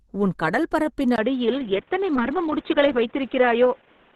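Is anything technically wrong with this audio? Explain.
Yes. Two faults are audible in this speech clip.

Throughout, the sound points to Opus compression, likely at around 16 kbps in the codec's hybrid mode, where a speech-oriented coder handles the lower band and a transform coder fills the top. At that rate the encoder cannot spend enough bits on detail, so content stops at about 12.2 kHz and the damage is plainly audible: the voice comes across hoarse and grainy rather than clean.

From 1.16 s to the end, right after "உன் கடல்பரப்பின்", there is an input switched to a poorer device, likely a change to another microphone or a headset's call profile. A silence of about 20 ms marks the switch. After it the band stops near 3.8 kHz, so the speech turns dull and boxy. A new background noise comes in, roughly 35 dB below the speech, while the overall level stays about the same.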